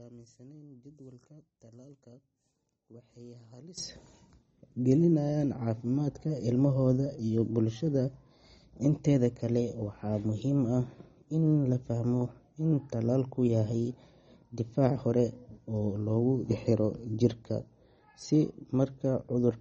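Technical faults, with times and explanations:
Throughout, MP3 compression: the speech sounds watery and swirly, with s sounds turned metallic and chirpy, and nothing reaches above about 8.3 kHz. This is likely a low-bitrate MP3 encode, fitting about 32 kbps, where the encoder cuts the treble and drops weak frequency lines from frame to frame.
0.00 to 3.78 s, one channel inverted: the speech falls to a faint trace, about 22 dB quieter. The likely cause is reversed polarity on one stereo channel, so the material shared by both channels cancels when they are summed to mono, leaving only their small difference.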